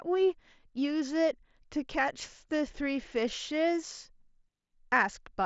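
No technical faults turn up anywhere in the speech. It carries the band limit of a Bluetooth mSBC headset codec, with nothing above about 7.7 kHz and only light codec graininess on the louder sounds.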